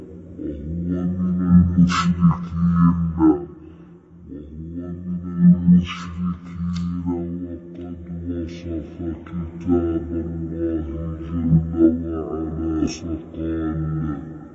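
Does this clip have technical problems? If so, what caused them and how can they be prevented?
Yes. A wrong sample rate affects the whole clip. The audio fits a 44.1 kHz recording clocked out at about 22 kHz without conversion, so everything plays at 0.5 times speed and 12 semitones low. Prevent it by matching the playback rate to the file or resampling.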